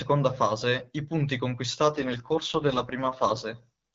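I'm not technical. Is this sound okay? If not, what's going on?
No. From 1.88 to 3.44 s, just after "fase i punti", an AMR rate drop makes the speech rough and robotic, with no gaps or muffling. A weak phone connection forced the call onto a lower-quality setting.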